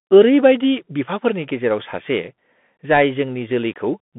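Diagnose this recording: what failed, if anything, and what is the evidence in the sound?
Codec stage: a Bluetooth CVSD headset codec runs throughout, consistent with a 64 kbps link. A spectrogram shows a 150 Hz to 3.5 kHz band, empty above 3.8 kHz. One-bit up/down steps lag loud highs, leaving scratchy s sounds over granular hiss.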